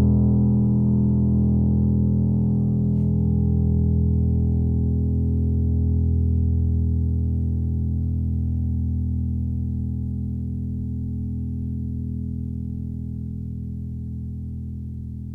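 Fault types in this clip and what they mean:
No faults are present.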